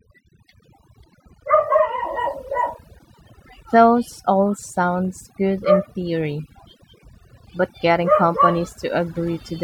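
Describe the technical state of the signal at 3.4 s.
At 3.4 s the speech is affected by overdone noise removal, present throughout the clip. An aggressive noise reducer is cutting frequency bands near its noise estimate. Quiet parts of the speech vanish with them. The background drops and breaks up into twinkling specks.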